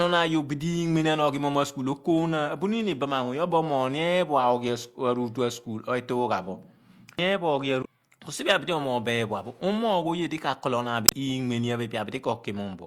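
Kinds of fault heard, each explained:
Damaged data in a compressed stream: corrupted or missing bytes in the encoded speech made the decoder misread those frames and lose sync while it searched for the next valid frame header. This produces short glitches at 7.81–7.86 s and 11.05–11.13 s.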